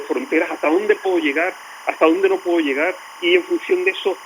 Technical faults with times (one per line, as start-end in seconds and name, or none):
0.00-4.26 timecode bleed